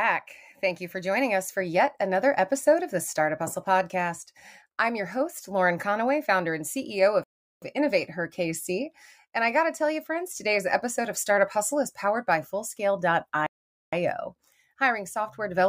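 Playback stalls at 7.24 s and 13.47 s: the sound cuts out mid-flow and the output goes silent, for 384 ms the first time (until 7.62 s) and 460 ms the second (until 13.93 s), before resuming. The cause is likely the player running short of buffered data, or its playback thread being held up, so nothing reached the output until it caught up. Each gap is long enough to hear as a distinct hole.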